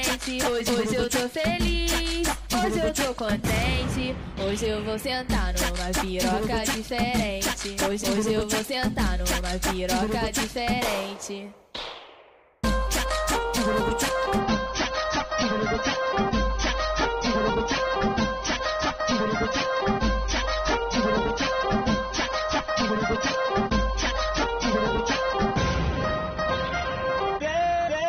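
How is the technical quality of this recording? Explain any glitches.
The quality drops partway through. From 14.40 s to the end, the adaptive stream switched to a lower bitrate version when the connection slowed. Nothing above 6.3 kHz survives, which fits a fall to roughly 24 kbit/s, so the top end suddenly dulls and codec artefacts thicken, with no gap.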